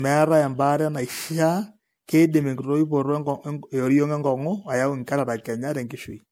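Generation loss runs through the whole speech clip: it sounds swirly, smeared and hollow, with blurred consonant attacks. The likely cause is repeated MP3 decoding and re-encoding, around five passes at a rate near 96 kbit/s, each re-quantising on a shifted frame grid so that noise and spectral gaps accumulate.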